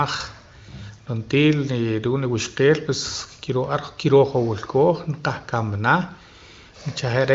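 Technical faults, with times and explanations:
No faults found; the speech carries the AMR wideband (HD Voice) codec's band limit, with nothing above about 7.3 kHz and at most faint coding texture, which fits its 23.05 kbit/s mode.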